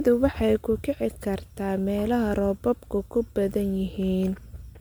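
From start to end the speech carries generation loss, likely from repeated MP3 encoding, about seven passes at roughly 130 kbit/s. Each re-encode quantises on a shifted frame grid, so errors pile up: the sound turns swirly, hollow and smeared, with softened consonant attacks. A spectrogram shows speckled, flickering holes between harmonics and blurred onsets. Energy stops near 20.1 kHz, and the waveform's transients look rounded rather than sharp.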